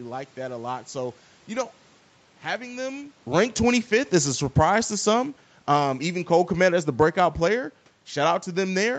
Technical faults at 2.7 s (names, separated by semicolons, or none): none